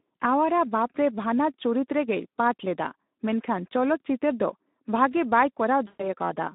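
From start to finish, Speex codec damage is plainly audible. Speech sounds hoarse and noisy, confined to roughly 200 Hz to 3.7 kHz, which fits a low bitrate near 11 kbps.

From 5.87 to 6.07 s comes VoIP packet loss concealed by the speech codec. About 120 ms of audio is missing. The decoder stretches its last sound and fades it out, and weakness lingers afterwards.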